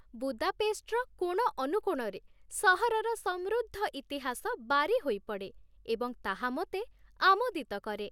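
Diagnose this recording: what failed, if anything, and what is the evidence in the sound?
No failure found in this recording.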